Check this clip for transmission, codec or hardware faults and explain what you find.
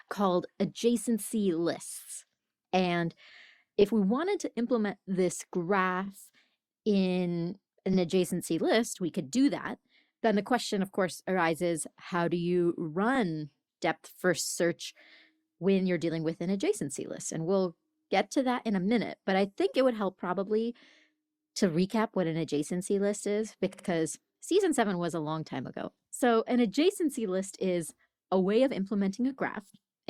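The speech has one kind of fault, repeated frames, heard five times as a short stutter, at 3.81 to 3.84, 6.05 to 6.09, 7.93 to 7.98, 13.15 to 13.18 and 23.73 to 23.86 s. Each time a block of compressed audio is played again. The blocks are 20, 40, 40, 20 and 60 ms long, which fits 20 ms codec frames. The last block plays twice more, adding 120 ms.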